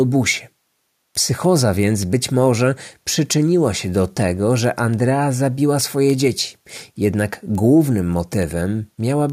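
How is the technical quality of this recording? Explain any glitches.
The recording has one clear fault, word clock ticks, running through the speech from 0.28 s to 9.30 s. Around thirty sharp ticks of uneven strength fall about every 0.3 s as an unlocked receiver's clock slides against the sender's, dropping or repeating one sample each time, which fits a mismatch of roughly 70 ppm. Unlike buffer dropouts, the ticks are evenly spaced and leave no gaps in the sound.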